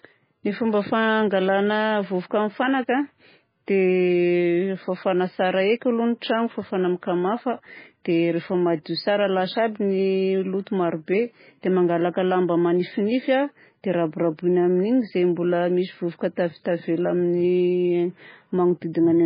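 From start to finish the speech sits under a hard ceiling at 5 kHz and sounds watery and swirly, likely heavy MP3 compression at a bitrate of roughly 16 kbps.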